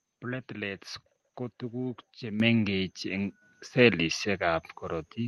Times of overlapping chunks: none

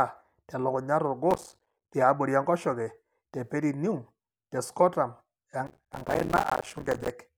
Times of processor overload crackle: 1.31-1.91, 5.67-7.10

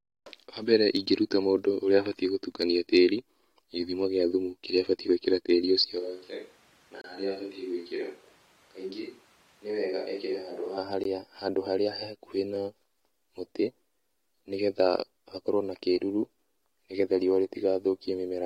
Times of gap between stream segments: 7.01-7.04, 11.04

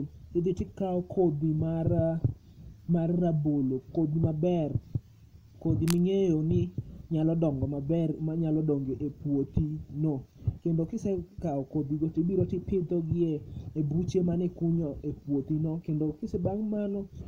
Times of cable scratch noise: 5.82-5.98

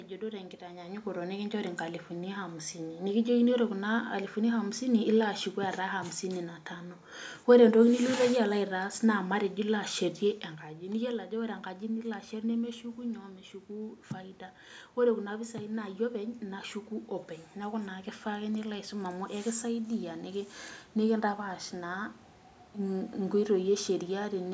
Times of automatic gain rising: 15.29-18.55

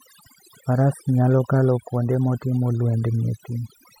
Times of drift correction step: none

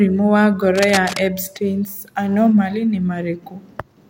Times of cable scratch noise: 0.75-1.22

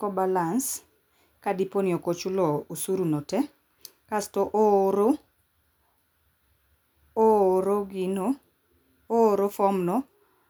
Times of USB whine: none

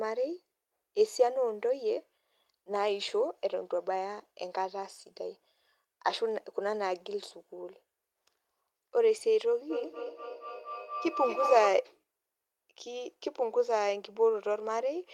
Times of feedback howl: 9.70-11.92

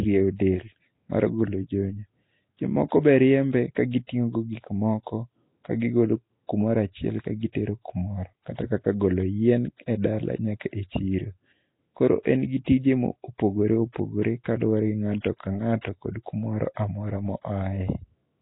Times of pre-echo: 12.65-12.67

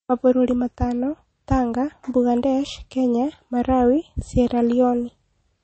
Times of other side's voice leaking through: none

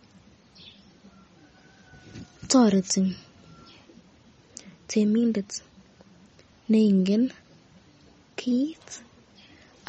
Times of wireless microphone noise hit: none

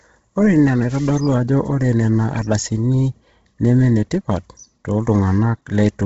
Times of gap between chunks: none

